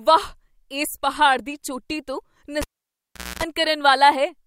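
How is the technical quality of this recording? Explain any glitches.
The recording has one clear glitch, a cable pulled and plugged in, from 2.62 to 3.43 s. A pop opens a dropout of about 765 ms. As the plug's tip touches, about 250 ms of 60 Hz mains buzz leaks through before a second pop restores the sound. On a waveform, two spikes bracket a flat gap. A spectrogram shows horizontal 60 Hz harmonic lines in the buzz section.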